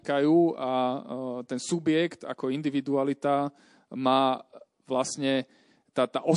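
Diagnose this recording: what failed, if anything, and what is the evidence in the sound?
Codec stage. Compression damage is plainly audible across the whole speech clip. Weak detail flickers in and out from frame to frame. That gives a watery, swirling texture, with metallic chirps on s sounds. The likely cause is MP3 coding at a low bitrate, consistent with about 48 kbps. Short of bits, the encoder zeroes quiet frequency lines.

Pre-echo, also at the codec stage. Just before a sharp attack at 5.93 to 5.96 s, a hiss rises about 12 dB and leads the onset by 29 ms. The attack then sounds soft and smeared. The encoder spread its quantisation noise across a long transform block, which fits a window of 48 ms. The noise sized for the loud onset leaked into the quiet gap before it. The encoder never switched to short blocks here, so the smear went uncorrected.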